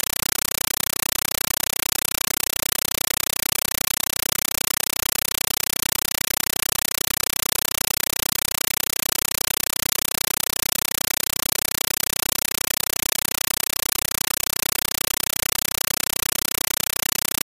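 From start to finish, a compressed stream is played as audio: an AC-3 (Dolby Digital) bitstream reaches the output as ordinary samples instead of being decoded. Each coded frame becomes an 8 ms burst of noise followed by zero padding, repeating 31.25 times a second, heard as very loud, chattering static. The waveform shows evenly spaced solid blocks between flat gaps, and a spectrogram shows broadband vertical stripes. The burst pattern fits a 384 kbps stream.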